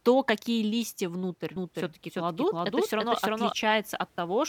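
From 1.56 s, just after "то какие листья внутрь", the speech is heard twice. This is a doubled audio track. A second full-band copy runs about a third of a second behind the first, at roughly the same loudness. It carries no reverb tail or room colour. It simply repeats. The likely cause is a second capture of the same signal through a slower path. The copy switches on abruptly and cuts off just as sharply at 3.52 s.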